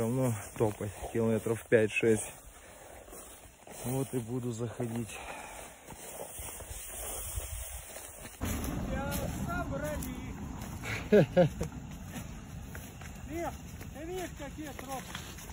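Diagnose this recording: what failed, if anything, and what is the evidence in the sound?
Nothing failed; no stage shows a fault in this recording.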